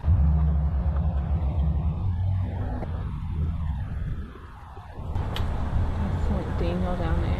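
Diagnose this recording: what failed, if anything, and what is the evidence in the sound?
A brief glitch cuts through the audio at 2.81 to 2.84 s. That points to damaged data in a compressed stream at the codec stage: corrupted frames there are misread, the decoder loses sync and resumes at the next valid frame header.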